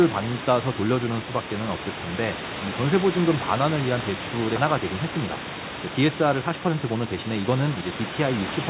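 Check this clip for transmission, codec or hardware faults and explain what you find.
One fault is audible: a jitter buffer speed-up from 6.42 to 7.82 s, heard over the narrowband G.711 mu-law call path (nothing above 4 kHz) and room noise about 11 dB below the speech. Having built up excess delay, the receiver's buffer repeatedly cut slices of one or a few pitch periods, dropping about a fifth of a second. The speech runs hurried at 114% speed, pitch unchanged. A spectrogram shows level harmonics with compressed syllables, and the waveform shows fewer cycles per stretch.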